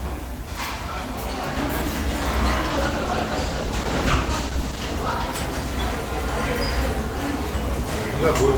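From 2.7 s to 5.21 s there is a call bitrate drop. The bandwidth estimate fell, so the encoder coded with far fewer bits. The sound turns rough and muffled, with highs cut, which fits a fall from about 32 to 13 kbps, held for about 2.4 s.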